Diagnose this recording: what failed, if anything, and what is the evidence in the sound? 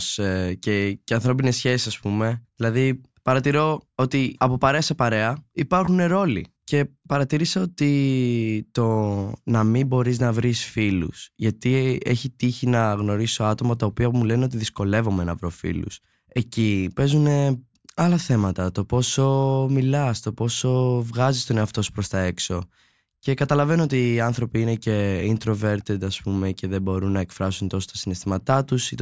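Nothing failed here: the speech comes through at every stage without a dropout, glitch or distortion worth flagging.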